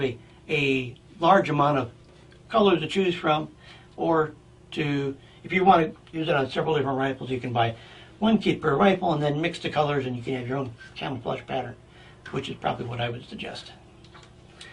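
At 6.13 to 6.19 s, compressed frames were skipped: the decoder never played a run of frames, either missing or rejected as damaged. Roughly a tenth of a second of audio vanishes, which fits about five 20 ms frames, and the audio jumps ahead by that much.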